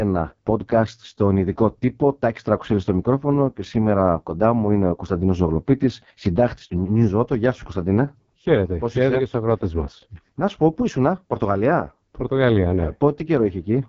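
From start to finish the speech carries AMR wideband (HD Voice) codec damage. It sounds rough and raspy. Nothing reaches above about 7.1 kHz. The heavy degradation fits the codec's lowest rate, around 6.6 kbit/s.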